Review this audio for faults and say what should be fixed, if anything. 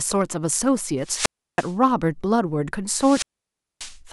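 Two wireless microphone squelch dropouts: 1.01–1.74 s with about 320 ms of near-silence, and 2.94–3.98 s with about 590 ms. The RF faded, so the receiver's squelch muted the speech. To prevent it, improve line of sight and antenna placement, or find a cleaner frequency, and check the transmitter battery.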